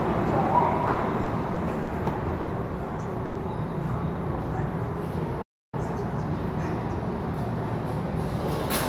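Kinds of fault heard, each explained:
Repeated stalls (stutter): From 0.93 to 1.89 s the sound catches four times, each gap bridged by stretching what came just before, about 120 ms in all and at most 50 ms at once. Late packets kept draining the jitter buffer, so it drags without losing anything.
Short stall from a late packet: Around 2.41 to 2.49 s one sound hangs on for an extra 60 ms, with a faint buzz or dip, before picking up exactly where it left off. A single packet turned up 60 ms late and the receiver filled the wait.
Call audio freeze: At 3.25 to 3.37 s the sound turns into a held, fading buzz or hiss for about 100 ms, never dropping to silence, then carries on from the same point. The likely cause is packets held up in transit that emptied the jitter buffer.
Playback stall: From 5.41 to 5.74 s the output simply goes dead for roughly 0.31 s in mid-flow, then resumes. That pattern points to the player running out of data or its thread getting blocked, with silence until it recovered.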